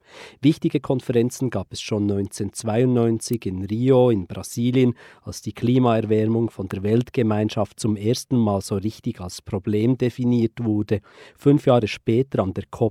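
At 3.33 s there's a sharp little snap sitting on top of the speech, and another at 6.71 s that's louder, peaking somewhere around -10 dBFS against roughly -15 dBFS for the first. Both read as an electrical switching spike: a brief arc, likely from a nearby switch, motor or static discharge, gets picked up by the audio line and lands as a tight click that has nothing to do with the speech underneath.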